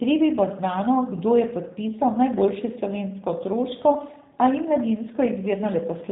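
From start to finish the speech carries G.729 codec damage, plainly audible: a rough, slightly synthetic quality, as if rebuilt from a filter and sparse pulses, consistent with an 8 kbit/s stream. A spectrogram shows nothing above about 3.8 kHz, a hard ceiling across the whole clip.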